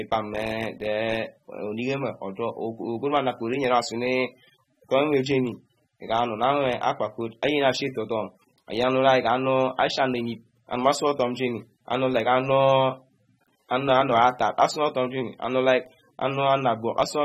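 A speech recording carries plainly audible codec damage from start to finish, with nothing above 16.4 kHz. This is likely AAC compression, consistent with AAC-LC at a low rate of around 27 kbps. At that rate the encoder spends too few bits on each frame's spectral lines, so it cuts off the top band and quantises the remaining detail coarsely against its hearing model. That coarse quantisation leaves the speech smeared and unstable in texture rather than clean.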